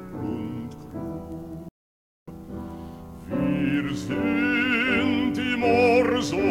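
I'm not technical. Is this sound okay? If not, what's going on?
No. The music cuts out at 1.69 seconds and stays silent until 2.28 seconds. That is a gap of about 0.59 seconds, long enough to notice clearly. This is called a playback stall. The sound did not fade or get quieter. It simply stopped in the middle of playing. The likely cause is the player running short of audio data to send out, or being held up by something else on the device. Once it caught up, the music started again.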